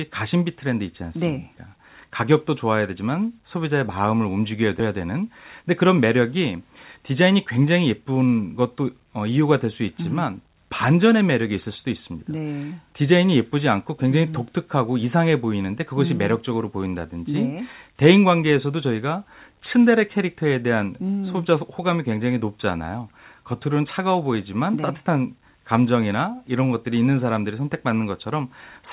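At 4.8 s the speech jumps forward: a skip ahead where something like 400 ms of audio never gets played. Later audio was already waiting, so that stretch was dropped and the two sides joined almost directly, with no fill. You hear a clean but abrupt splice, with the phrase lurching on and a chunk simply missing.

Right after, the buffer is still running long, and you get two bursts of jitter buffer speed-up, from 5.62 to 6.18 s at 108% and from 6.96 to 7.65 s at 107%. Each time the receiver trims short pitch-period-sized pieces over and over, about 50 ms in total per burst, so the talking briefly sounds hurried while the pitch stays put. All of it comes through the narrowband G.711 A-law call path, so there's nothing above 4 kHz anywhere.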